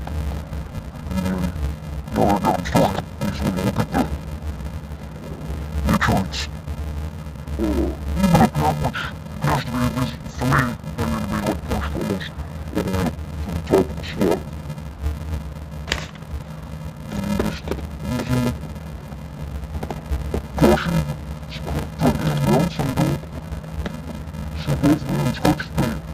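From start to finish, interleaved audio read as planar: each 2.67 ms block, which fits a 128-sample block, is split into halves and misassigned to channels, leaving the sound dull and robotic with a 375 Hz buzz. Unlike a sample-rate mismatch, pace holds and pitch shows no octave drop.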